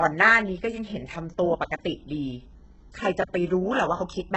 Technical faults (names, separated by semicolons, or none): HE-AAC compression; repeated buffer